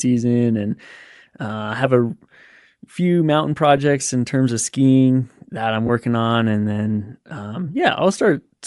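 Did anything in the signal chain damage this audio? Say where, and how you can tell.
Yes. At the codec stage, the speech likely passed through Bluetooth LC3 compression throughout: the upper band is noise-filled, giving a grainy, breathy edge that points to roughly 48 kbps.

On the wireless link, lost LE Audio frames appear at 3.77 s, after "few mountain", and 5.87 to 5.90 s, before "on and then". The decoder's repeated spectrum becomes 10 ms and 20 ms noisy smears.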